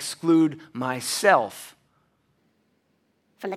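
At 2.37 s the speech jumps to a faster, higher sound. This lasts to the end, at 3.57 s. It is a wrong sample rate fault. The samples are played faster than they were recorded, with no conversion. The speed rises by 1.5 times. The pitch rises by about 7 semitones, a fifth. That ratio fits audio recorded at 32 kHz and played back at 48 kHz. The voice turns thin and hurried, like a sped-up tape.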